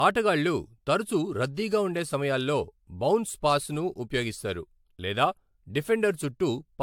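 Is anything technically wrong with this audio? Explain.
Yes. Throughout the speech there is a swirly, hollow smear, with consonant attacks blurred, that seems heavier than a single moderate-bitrate encode would leave. Nothing is present above 19.1 kHz. This is likely generation loss: the audio appears to have been passed through a lossy AAC-type codec around four times, at rates consistent with roughly 110 kbit/s. Each re-encode quantises on a shifted frame grid, so noise and spectral holes accumulate.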